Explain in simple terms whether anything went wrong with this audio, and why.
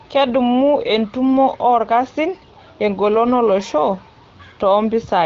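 Nothing went wrong here: the speech simply carries the usual character of an HD Voice phone call, with the AMR wideband (HD Voice) codec doing its normal job of squeezing the sound down for sending.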